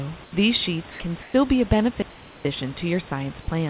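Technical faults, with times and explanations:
0.24–0.32 s, 0.92–1.00 s, and 1.22–1.34 s, just before "be a": comfort noise in place of the background. The real room noise in each gap gets swapped for flat, featureless hiss, about 6 dB quieter, then about 3 dB louder, then about 2 dB quieter. That's likely discontinuous transmission filling the pauses.
2.02–2.45 s, right after "be a": digital wireless dropout. The link mutes cleanly for 430 ms, a near-silent hole with no noise burst on either side, as the receiver fades out when too much data goes missing.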